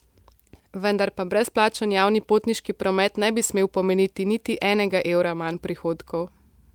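No technical faults are audible anywhere in the recording.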